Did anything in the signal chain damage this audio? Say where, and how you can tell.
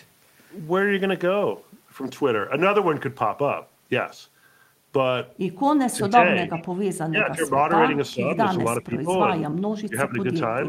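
Yes, call processing damaged it. Speech suppressed in double talk: the talker dips at 5.96–6.18, 6.45–6.50, 7.10–7.52, 8.11–8.37, 8.82–9.10 and 9.88–10.25 s, by up to about 20 dB. On a waveform the envelope pinches; a spectrogram shows thinned, gapped bands. This is likely an echo canceller turning its own talker down during overlap.

Echo leak at 6.57–6.63 s: a faint copy of the voice returns 375 ms late, about 20 dB below the speech. A spectrogram shows a weak, time-shifted repeat of earlier harmonics. The likely cause is loudspeaker pickup that the canceller failed to remove.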